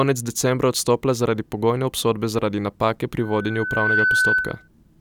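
From 3.19 s to 4.68 s a loudspeaker feedback squeal rises over the speech. A single 1.5 kHz tone swells over roughly three quarters of a second to a few decibels above the speech, because the microphone picks up its own loudspeaker with loop gain above one.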